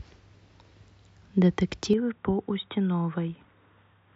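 Speech clip where, from 1.93 s to the end, the sound abruptly turns duller, nothing above 3.8 kHz, and about 5 dB quieter: likely an input switched to a poorer device.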